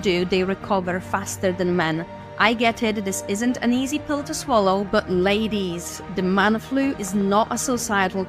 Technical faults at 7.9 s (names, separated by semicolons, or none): train of clicks